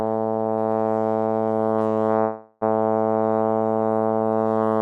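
At 2.21 s the music stops moving forward and the last instant of sound is stretched into a buzzy, hissing tail that fades over about 0.4 s without dropping to silence. At 2.63 s the music resumes exactly where it left off, so nothing is lost, but everything after runs about 400 ms later. This is a call audio freeze, likely from packets held up in transit until the jitter buffer emptied and the receiver extended the last sound.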